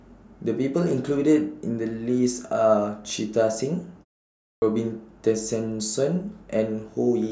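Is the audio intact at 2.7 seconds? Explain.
Yes, the speech is intact at 2.7 seconds, with no dropout, distortion or other fault audible at that point.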